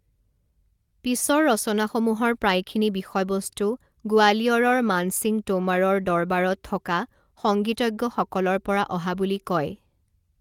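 At 1.27 to 1.29 s the speech turns briefly rough and grainy for about 20 ms, which fits one lost packet rebuilt from error correction. The packet was lost, but the next one carried a low-bitrate copy of it, and the decoder played that copy. Unlike ordinary loss concealment, there's no silent gap and no smeared or repeated stretch of sound. The right content arrives on time, just coarser and noisier for that one frame.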